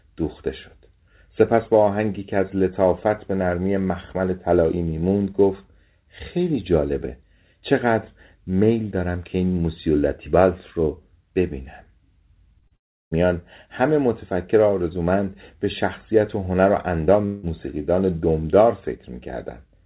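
At 12.59 to 12.65 s and again at 12.68 to 12.73 s there is short concealed packet loss. Roughly 30 ms of audio went missing each time, and the receiver patched it by extending the preceding sound. Each patch is heard as a brief smear or wobble. On a spectrogram the last sound runs on suspiciously smooth and flat for about 25 ms, then rejoins the real signal.

Right after, from 12.76 to 13.14 s, comes what is likely a long network dropout. The last sound is carried on as a decaying buzz or hiss and then thins to near silence. On the waveform this is a tapering envelope falling to almost flat, with a gap on the spectrogram up to the 4 kHz ceiling of the call band, which fits G.711. From 17.25 to 17.46 s another likely dropout is concealed for its full length of about 175 ms and never reaches silence. The waveform stays filled but the spectrogram shows a smooth, static synthetic stretch.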